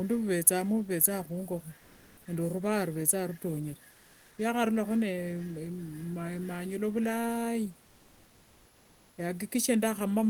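A speech recording where the pauses at 1.77 to 2.25 s, 3.91 to 4.37 s after "ruvethanga rutongere", and 7.85 to 9.17 s after "manyula vilai" get comfort noise in place of the background: the real room texture gives way to flat, featureless hiss, barely quieter in the last two, likely from Opus discontinuous transmission.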